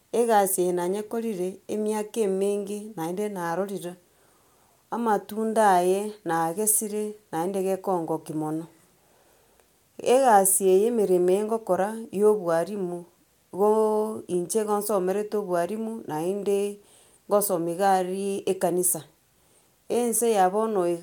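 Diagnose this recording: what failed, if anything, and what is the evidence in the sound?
Nothing failed: no stage of the recording shows any evidence of a fault in the sound.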